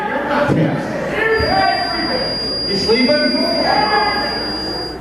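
A feedback whistle runs from 1.28 s to the end: a thin, steady tone at 4.8 kHz, a few decibels below the main sound and swelling and fading slowly in level. It is likely a loudspeaker-to-microphone loop held just at the edge of feedback, sustaining that one frequency without building up.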